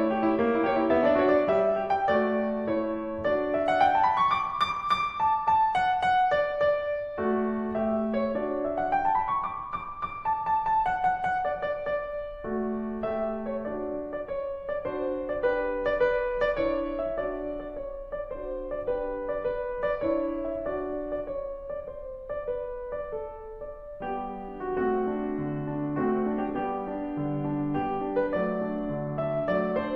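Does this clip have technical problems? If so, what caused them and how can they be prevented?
No, this music clip has no technical problems.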